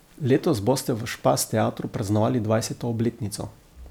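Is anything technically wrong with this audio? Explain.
Yes. Throughout the speech, the signal was likely truncated to a low bit depth without dither, consistent with about 9 bits, leaving grainy distortion roughly 40 dB below the signal that follows the voice.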